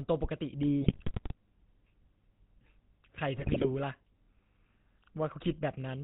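Throughout, the speech has passed through the GSM full-rate codec. It rebuilds the voice from a vocal-tract model driven by a coarse, regularly spaced pulse excitation, and it discards everything above 4 kHz. The result is a narrow, muffled band and a constant buzzy, gravelly roughness laid over every syllable, consistent with the 13 kbps full-rate stream. The damage is plainly audible from start to finish.

At 0.82 to 1.34 s, GSM bit errors appear. Corrupted bits reach the decoder and scramble the filter, pitch and gain values for a run of frames, so the spectrum warps and the level jumps. The voice breaks into squawks, pops and gargling. At 3.36 to 3.66 s a second, shorter burst comes from a higher error rate on the link.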